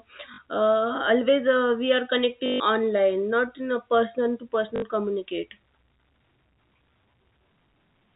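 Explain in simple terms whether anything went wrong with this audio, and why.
Something did go wrong: packet loss with last packet repeated. At 0.34 s, 2.46 s and 4.76 s, the sound briefly stutters robotically for 40, 140 and 60 ms. Unlike a dropout, it never falls silent; the last snippet replays, fitting 20 ms packets. The telephone-band G.711 sound is normal.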